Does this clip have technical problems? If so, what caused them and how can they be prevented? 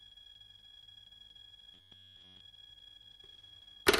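Yes. From 1.74 to 2.40 s there is robotic sound from repeated short buffers: the sound collapses into a rigid, metallic buzz at 93.8 Hz. Fresh audio likely arrived too slowly, so the playback kept re-looping a slice of about 10.7 ms and skipped most of the real material in that stretch. On a waveform, the segment shows one short cycle tiled over and over. A spectrogram shows evenly spaced, unusually flat harmonic lines at multiples of 93.8 Hz across that span. Giving the audio path a larger buffer and a steadier processing load prevents the underruns that cause these repeats.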